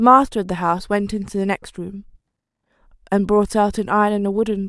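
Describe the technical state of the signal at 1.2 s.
At 1.2 s the signal is intact, with no audible technical fault.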